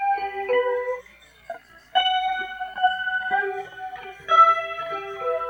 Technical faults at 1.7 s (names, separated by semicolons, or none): clock slip clicks